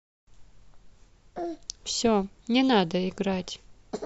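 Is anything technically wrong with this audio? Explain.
No, nothing stood out as technically wrong when listening through this speech recording.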